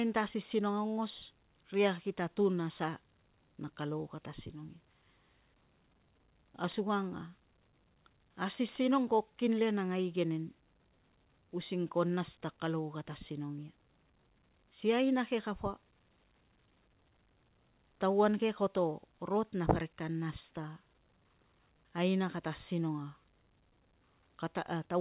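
A speech recording with nothing technically wrong with it, heard through a call path that passes nothing above 4 kHz.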